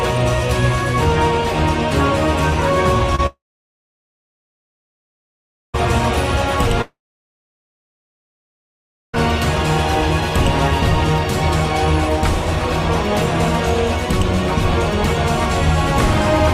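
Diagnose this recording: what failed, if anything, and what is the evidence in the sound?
The network path failed first with a short concealed packet loss at 3.15 to 3.20 s. About 20 ms of audio never arrived, and the decoder bridged roughly 29 ms by extending the preceding sound before crossfading back into real data. The result is a brief smear or wobble. A converter or buffer glitch would produce a hard click or step, so the soft, continuous character points to concealment on the receiving side.

Two long silences follow, from 3.26 to 5.76 s and from 6.82 to 9.15 s, each lasting about 2.3 to 2.5 s. Each starts with a fading buzz or hiss as the concealment runs out, then drops to silence for roughly 2.2 to 2.35 s. The audio then resumes further along, with the gap simply gone. This pattern is most likely a long network dropout. A mute or gate would cut cleanly, with no decaying tail, and a stall would resume late rather than skip ahead.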